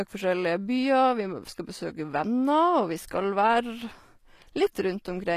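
Speech, carrying plainly audible HE-AAC compression damage throughout: s sounds come out gritty and metallic because the treble is rebuilt from copied lower bands, which fits a low bitrate around 24 kbps. A spectrogram would show repeated, blocky high-band patches and nothing above 14.9 kHz.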